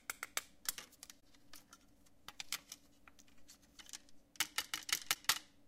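A recording of sounds with three brief glitches, at 1.19–1.22 s, 3.78–3.80 s and 5.14–5.16 s, where the audio skips ahead with a short disturbance of roughly one 26 ms frame. These are likely a broken MP3 bit reservoir, where dropped frames leave the next frame reading another frame's data.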